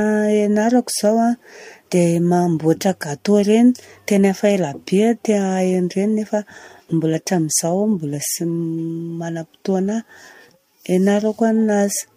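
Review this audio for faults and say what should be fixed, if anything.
Nothing stood out on listening to this speech recording, so there is nothing here that needs fixing.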